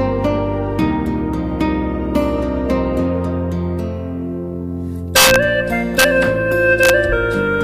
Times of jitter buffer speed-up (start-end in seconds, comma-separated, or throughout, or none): none